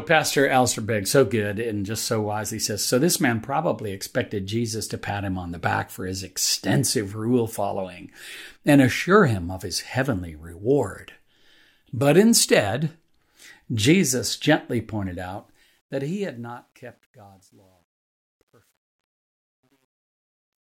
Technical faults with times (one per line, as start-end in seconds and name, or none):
15.36-20.75 truncation distortion on a fade